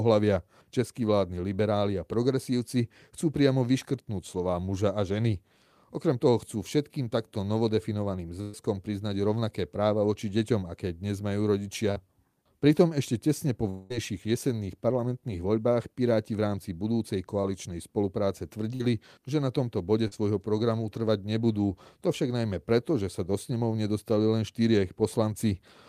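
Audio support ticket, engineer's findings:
Burst of packet loss, 8.41–8.55 s and 18.75–18.82 s: roughly 120 ms and 40 ms of speech missing; receiver concealment extends the last sound into a decaying buzz or hiss, then resumes past the gap.

Short concealed packet loss, 11.91–11.98 s, 17.41–17.45 s, 20.08–20.13 s: brief smear or wobble where 20–40 ms never reached the decoder; jitter-buffer concealment extrapolates pitch or noise, then crossfades back.

Long network dropout, 13.70–13.98 s: about 200 ms of speech gone, replaced by a fading buzz or hiss with no silent stretch before audio returns; likely a network outage, with the receiver extrapolating through it.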